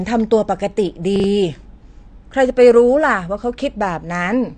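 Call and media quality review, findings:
AAC compression, throughout: dull, smeared speech with no content above 9 kHz and plainly audible warbling on sibilants. Likely AAC-LC at a low rate, fitting about 32 kbps, where the encoder drops the top band and coarsely quantises the rest.

Chunks out of order, 1.16 to 1.24 s: brief jumbled moment. Packet or buffer handling: one 40 ms chunk plays a chunk late, after its successor, leaving hard joins at each boundary.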